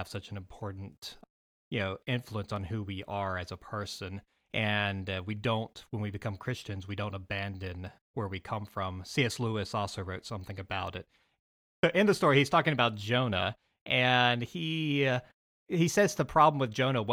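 Nothing in the recording stood out as a technical fault on listening.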